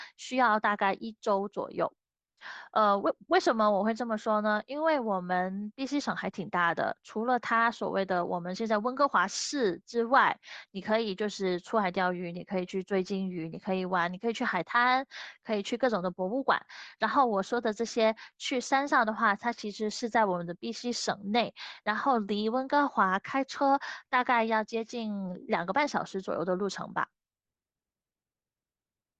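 No technical faults can be heard anywhere in this speech recording.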